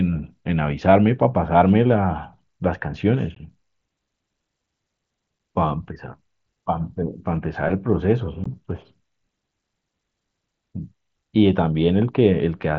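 Speech carried over a wideband mSBC headset link, passing audio up to 8 kHz, breaks with unconcealed Bluetooth headset packet loss at 3.35, 5.39 and 8.44 s. The holes last 15 ms, 7.5 ms and 15 ms, which fits one or two lost 7.5 ms frames. Unlike concealed loss, nothing is patched in, so each hole is abrupt, with silence or an idle pattern in place of the speech.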